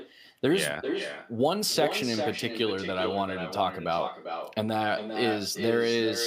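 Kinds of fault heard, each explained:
Echo with no canceller: a far-end speaker leaks into its mic unremoved, so speech returns about 6 dB down, under half a second later.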